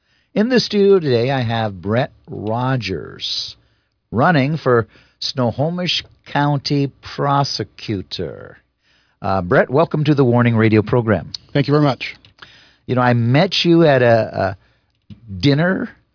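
A speech recording with no technical faults to report.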